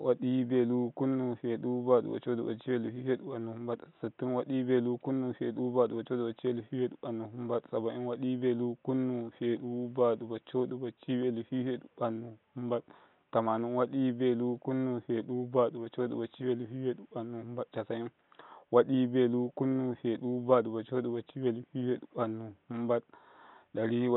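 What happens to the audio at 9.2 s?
Nothing goes wrong at 9.2 s: the speech runs on intact through that moment, with only the room's own background noise, about 44 dB below the speech, sitting quietly underneath.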